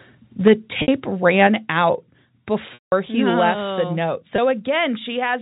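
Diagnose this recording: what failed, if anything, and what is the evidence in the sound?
At the converter stage there's microphone overload: a harsh, crackly edge on the peaks at 0.46–0.53 s and 1.42–1.45 s, flat-topped by about 4 dB and about 2 dB. The mic input gain was likely set too hot, so the loudest moments slammed into the converter's limit.

Then call processing steps in with microphone volume stepped down: sudden level drops at 0.48 s (about 4 dB), 1.47 s (about 4 dB), 2.49 s (about 2 dB) and 3.51 s (about 3 dB). The first two land on or just after the clipped peaks, where the software likely pulled the device gain down in one jump.

On the network side, packet loss with pitch repetition shows up three times: a 60 ms gap at 0.82–0.88 s, a long 180 ms one at 2.74–2.92 s, and a 20 ms blip at 4.36 s. The receiver loops the last pitch period, so the short one sounds briefly held and buzzy. 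The longer ones fade out before the sound cross-fades back in, which fits runs of three and nine 20 ms packets over the G.711 telephone link.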